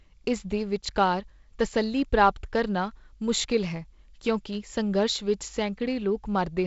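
Nothing goes wrong in this speech at any point; it's carried over G.722 wideband telephone coding at what sounds like 48 kbit/s, with nothing above about 7.7 kHz, just as that path is meant to work.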